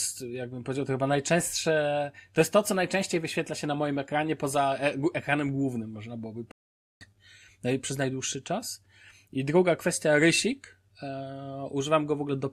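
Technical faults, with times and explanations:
6.51–7.05 s, stream reconnect: right after "ekranem głównym można byłoby" the connection drops and the speech goes silent for 495 ms. The player reconnects, starts a fresh decoder and picks the live stream up roughly 0.4 s further on, so a chunk is skipped.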